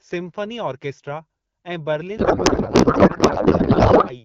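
From 2.18 s, after "सिम्फनी ऑर्केस्ट्रा ऐं", a codec payload misread turns the speech into garbled warble barely tracking it, which fits octet-aligned AMR read as bandwidth-efficient. Unlike packet loss, it persists to the end.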